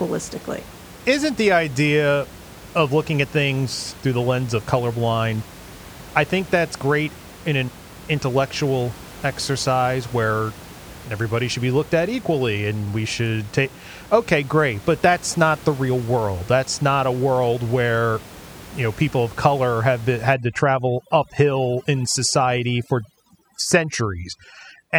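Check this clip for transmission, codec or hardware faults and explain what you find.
One fault is audible: overdone noise removal, running from 20.34 s, just after "of color have been", to the end of the clip. A noise reducer set too aggressively is gating individual frequency bands whenever their level sits near its noise estimate. The room noise, about 20 dB below the speech, drops and breaks up into twinkling specks, and the quieter parts of the speech spectrum go with it.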